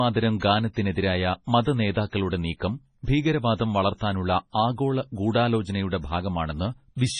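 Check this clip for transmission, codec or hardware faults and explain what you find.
One fault runs through the whole speech clip: heavy MP3 compression damage, likely from encoding at a bitrate as low as 24 kbps. Nothing is present above 10.4 kHz, where the encoder cut the treble to save bits. Weak frequency lines that fail to earn bits are zeroed and flicker on and off between frames, giving a watery, swirling texture with metallic chirps on s sounds, while consonant onsets lose their sharpness and smear.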